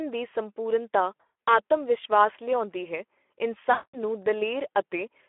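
Throughout, the speech shows plainly audible Speex codec damage. It is hoarse and noisy, confined to about 300 Hz to 3.4 kHz. This fits Speex near 11 kbps.

From 1.17 to 1.59 s comes VoIP packet loss concealed by the speech codec. The decoder stretches the last sound into a fading buzzy tone or coloured noise, with gaps up to 120 ms. The same happens from 3.71 to 3.99 s.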